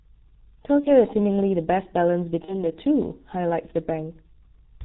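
It's a speech clip, and the whole thing has gone through the G.723.1 codec hard. Everything above 4 kHz is gone, so it sounds muffled and hoarse, with smeared consonants and a slow-moving voice model, which fits the low 6.3 kbit/s mode. On top of that there's VoIP packet loss concealed by the speech codec at 0.80–0.92 s and 2.45–2.64 s. Each gap sounds like about one 30 ms frame going missing. The decoder fills it by stretching the last sound into a buzzy tone or coloured noise that fades, and the voice stays weak or distorted for a bit afterwards while it recovers.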